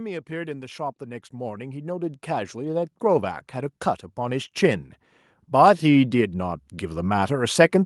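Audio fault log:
0.26–6.42 s, automatic gain rising: the level climbs steadily by about 20 dB as the gain control, judging the input too quiet, keeps raising its gain; the background swells along with the speech, which separates it from a speaker simply moving closer.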